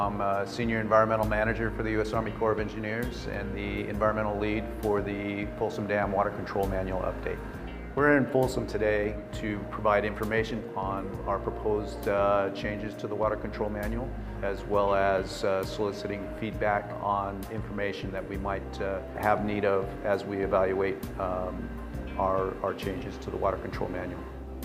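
No technical faults can be heard anywhere in this recording.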